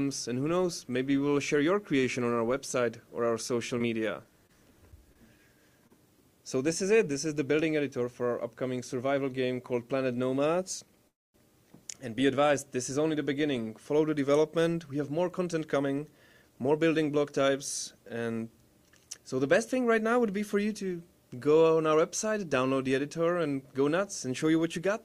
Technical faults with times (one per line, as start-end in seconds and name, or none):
3.47-4.51 scattered short gaps
5.13-5.17 short concealed packet loss
5.87-5.92 short concealed packet loss
11.08-11.36 call audio freeze
14.58-16.79 jitter buffer speed-up